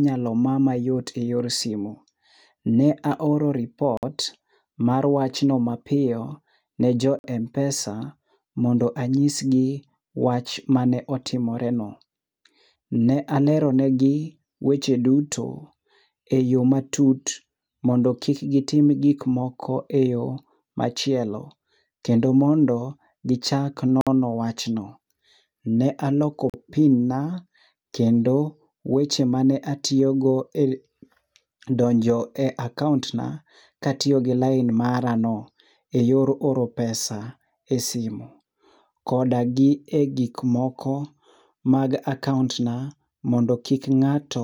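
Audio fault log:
3.97–4.03 s, 7.19–7.24 s (after "ne jo"), 24.01–24.07 s, 26.50–26.54 s (before "pin na kendo weche"): Bluetooth stall. Speech drops to silence for 43–56 ms, then resumes. Likely a drained headphone buffer awaiting resent packets.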